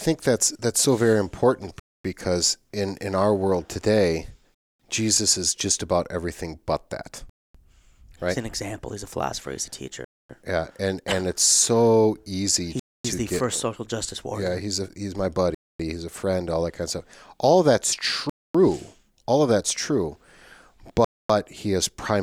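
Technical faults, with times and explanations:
1.80–21.05 s (1.80, 4.55, 7.30, 10.05, 12.80, 15.55, 18.30, 21.05 s), gap between chunks: speech drops to 250 ms silence every 2.75 s, after "in our world today", after "of that's", before "he is primarily savior". The audio plays as 2.5 s blocks with silence inserted at each join; nothing is lost, only interrupted.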